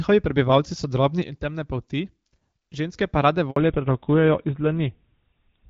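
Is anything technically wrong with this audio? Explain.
Yes, there are three faults.

From 1.22 s to 2.96 s, just after "prebivalci so", the speech and the background noise drop together by about 6 dB, then come back up before "pa rade". This is a sudden gain jump, likely a digital gain setting applied at one sample without any ramp.

At 3.50 s, right after "pa rade", the audio cuts out for 60 ms. This handover gap happens when the phone switches networks and no speech frames arrive until the new link is up, so whatever was said in that moment is lost.

From 3.56 s to the end the speech turns duller and rougher, with nothing left above 4 kHz. This is a fallback to narrowband: the call drops from the HD Voice wideband codec, whose light coding character fits a 12.65 kbit/s mode, to an older narrowband codec consistent with GSM full rate at 13 kbit/s.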